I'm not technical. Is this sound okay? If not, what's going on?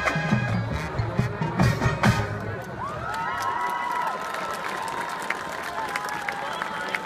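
No. Around 3.9 to 4.02 s and again at 5.4 to 5.58 s there are chunks out of order: short 60 ms slices play in the wrong sequence, one and then two slices late. Nothing goes missing, unlike a dropout, but each moment sounds briefly jumbled.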